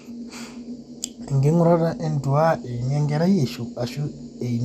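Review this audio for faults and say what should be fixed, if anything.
Throughout, the speech sounds dull and gurgling, likely from MP2 compression at a rate that fits around 80 kbps. Too few bits switch upper sub-bands off. The spectrogram shows nothing above 15.1 kHz and patchy, flickering high bands. To prevent this, encode at a higher bitrate or keep a lossless master.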